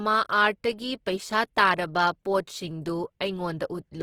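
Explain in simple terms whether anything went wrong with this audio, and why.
Something did go wrong. From start to finish the speech sounds rough, noisy and grainy. That points to Opus compression, likely from squeezing the audio into too little data. Unlike MP3 damage, there is less watery swirling and fewer hollow gaps, and the full treble range is still there.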